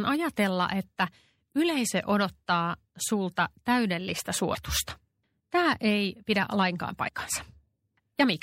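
Throughout the clip the speech has a watery, swirling quality, with sibilants turning metallic and softened consonant attacks. The damage is plainly audible. The likely cause is MP3 compression at a low bitrate, around 64 kbps to judge by the sound. Short of bits, the encoder let weak frequency components blink on and off between frames, and that flickering is what makes the sound swirl.

At 4.54 s, right after "yleisö odottaa sulta täydellistä", the speech jumps forward with a brief smeared blip rather than a sharp click. The same happens from 7.07 to 7.09 s, after "ei pidä lainkaan". Both are compressed frames skipped. Each time about 70 ms of audio goes missing, which fits three MP3 frames of 26.1 ms. Because neighbouring frames overlap, the join smears instead of clicking.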